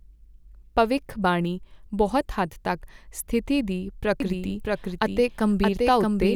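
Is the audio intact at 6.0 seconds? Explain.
No. At 6.0 seconds the clip is affected by a doubled audio track, which begins abruptly at 4.20 s and runs to the end. A second copy of the speech sits roughly 0.7 s behind the original and about 5 dB quieter, full-band and without any decay or room colour. This is likely a second capture through a slower path or two misaligned copies in an edit, so the speech overlaps itself with a late, clean repeat.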